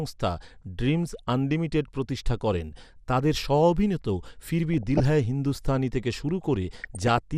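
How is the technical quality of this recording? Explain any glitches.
The speech is clearly degraded: dull, band-limited and grainy throughout, with three short bursts of burbling disruption.

MP2 compression: the top end sounds shut off and flickering, with a gurgling, granular roughness. The likely cause is MPEG Layer II coding at a low rate, consistent with about 80 kbps, where upper sub-bands lose their bits and drop out while the remaining bands are coarsely quantised.

DAB burbling: at 1.08–1.20 s, just before "আনলিমিটেড প্রতিষ্ঠা করেন তাদের", at 4.74–5.00 s, just before "হ্যায় হিন্দুস্তানি থেকে শুরু", and at 6.80–7.18 s, after those same words, short noise blips break into the sound. Reception errors, at a rate of a fraction of a percent, reach the MP2 data and put short blips of noise into individual sub-bands.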